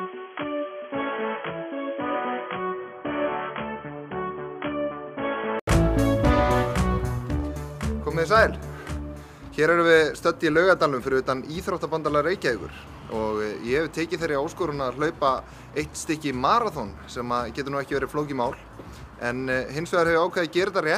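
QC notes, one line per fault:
0.00–5.67 s, input switched to a poorer device: likely a headset call profile or another microphone. Sound is dull and boxy, about 10 dB quieter, with its own noise roughly 40 dB down. Spectrogram shows nothing above 3.3 kHz; the waveform shows a smaller envelope, then an 80 ms gap before full band returns.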